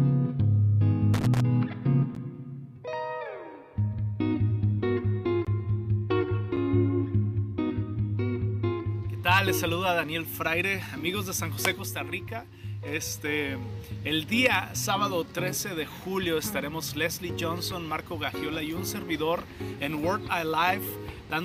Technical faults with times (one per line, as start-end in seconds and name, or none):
1.14-1.40 loose connector crackle